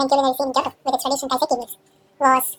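From the first moment to the end, the speech has been read two samples at a time, giving double speed. Each sample pair gets treated as one frame, so everything runs twice as fast and an octave (12 semitones) up.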